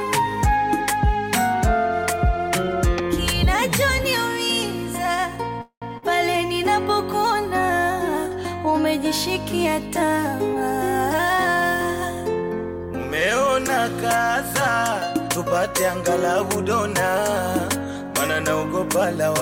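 A call audio freeze at 5.61 to 5.84 s was likely caused by packets being held up in transit until the receiver's jitter buffer ran dry. For about 0.2 s the last sound is stretched into a fading buzz that dies to silence for roughly the final 100 ms. Then the audio resumes exactly where it stopped. Nothing is lost, but the pause shifts everything after it about 202 ms later. Just afterwards, at 5.98 to 6.04 s, comes a short concealed packet loss. Around 40 ms of the stream never reached the decoder in time, so the receiver synthesised 44 ms of continuation from the preceding sound and cross-faded back into the real signal. This is heard as a brief smear or wobble right on the heels of the freeze, and a short, sharp sound in that window can disappear. Later, from 12.28 to 12.95 s, a jitter buffer speed-up occurs. Having accumulated more audio than its target, the buffer trims the excess by repeatedly cutting out pitch-period-sized fragments, around 70 ms in total. 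Across those two-thirds of a second the sound plays at about 109% speed with its pitch unchanged, giving a hurried feel before the pace settles back.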